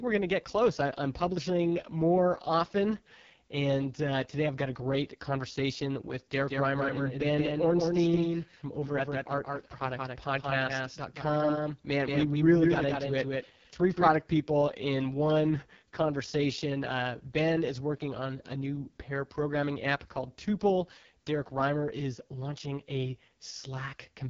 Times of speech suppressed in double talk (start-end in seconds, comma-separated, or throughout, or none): none